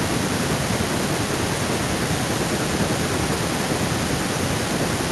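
From the start to the end of the speech, every phrase returns as a faint copy. This is echo with no canceller. The far end plays the call through a loudspeaker. Its microphone picks that sound up again, and nothing strips it out. So the speech comes back after a network round trip of roughly a third of a second. The copy sits about 15 dB below the direct speech. It sounds thinner, trailing each syllable like a shadow.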